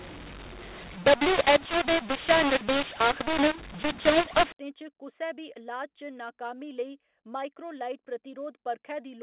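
Telephone-band speech, with everything stopping around 4 kHz as you'd expect from G.711, but the first 4.52 s (0.0 to 4.52 s) have a mu-law and A-law mix-up. Samples coded with mu-law are being expanded with the A-law curve, so the levels get scrambled. Some peaks come out too hot and others too small, which gives the speech that harsh, gritty distortion. The quietest samples get pushed well above silence, so the gaps fill with noise instead of going quiet.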